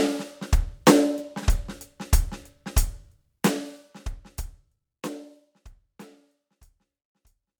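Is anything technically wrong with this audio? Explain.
No, nothing's wrong here; the music just eases down in a smooth fade-out starting from around the 3-second mark, the way an editor would finish it off.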